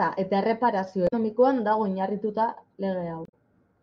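Damaged data in the compressed speech stream makes the decoder lose frame sync at 1.05–1.13 s, just before "dago oinarrituta", and again at 3.25–3.34 s, leaving brief glitches.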